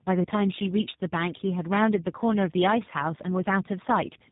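From start to finish the speech carries tandem speech coding: it sounds rougher, more muffled and more warbly than one low-rate codec would leave it, which points to two speech coders in a row, likely a GSM full-rate stage followed by G.729A, with a G.711 link between. The second coder re-models the first one's artefacts and compounds them. A spectrogram shows nothing above 3.8 kHz and smeared, blotchy harmonics, and the waveform looks coarsened.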